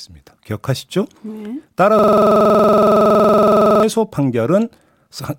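From 1.99 to 3.83 s the speech locks into a system hang loop: one 46 ms slice, which fits a 2048-sample buffer, repeats exactly about forty times as the hardware recycles its buffer. Unlike packet-loss stutter, the repeats are identical and evenly spaced, producing a rigid 21.5 Hz rattle.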